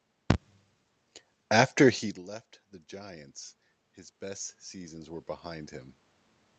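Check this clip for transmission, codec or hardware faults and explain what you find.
One fault stands out: automatic gain rising, from 3.89 to 5.82 s. After the input dropped about 22 dB, the gain control raised its gain about 6 dB over nearly two seconds, so voice and room noise swell together. The waveform envelope ramps upward, and the spectrogram brightens across every band, noise floor included. The quieter passage near 2 s comes from the talker moving, not from the system.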